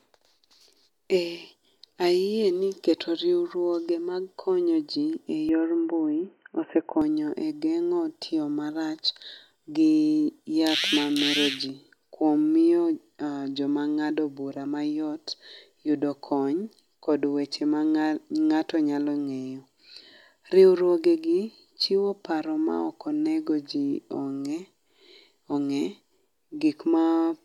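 At 5.49 s, right after "mar konyo ji e", the speech suddenly turns dull and boxy. Nothing above about 3 kHz comes through. The level shifts by a few decibels, and a faint new background noise sits far below the speech. There is no gap at the change. This is most likely the input switched to a poorer device, a narrower-band microphone or headset with its own tone and noise. Full clarity returns at 7.02 s, just before "e genyo tiyo marach".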